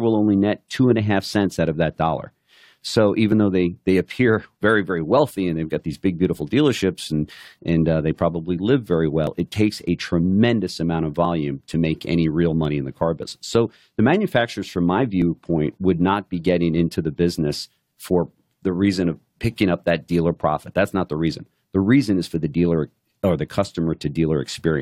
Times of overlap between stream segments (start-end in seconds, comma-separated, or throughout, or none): 9.27, 15.22